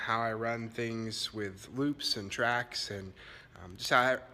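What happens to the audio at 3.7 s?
At 3.7 s the audio carries one of a regular train of sharp, uneven clicks, recurring roughly every 0.15 s from 0.15 to 4.30 s. These are word clock ticks: the receiver's unlocked clock drifts by around 150 ppm, so each slip drops or repeats a single sample.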